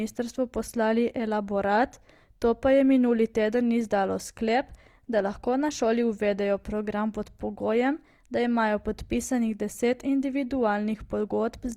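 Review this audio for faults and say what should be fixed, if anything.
Opus compression, throughout the clip: the speech sounds rough and grainy, with a noisy sheen across the full bandwidth instead of swirling gaps. This is likely because the encoder filled starved bands with folded or noise content, which fits music-mode Opus at around 24 kbps. Encoding at a higher bitrate, or working from an uncompressed master, would prevent it.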